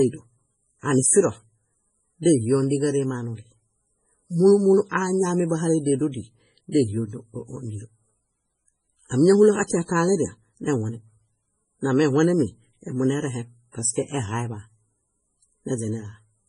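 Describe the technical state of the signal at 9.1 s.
At 9.09 to 9.11 s there is pre-echo: the codec spread quantisation noise across a transform block holding a sharp attack, so about 27 ms of hiss precedes the onset and softens it. Throughout, nothing is present above 10.5 kHz, and the heavy watery, swirling smear is likely from MP3 compression at a bitrate consistent with roughly 24 kbps.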